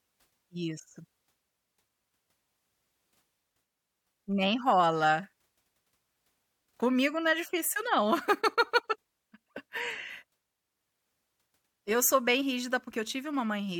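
Listening to this speech recording, nothing stood out as a technical problem at any point.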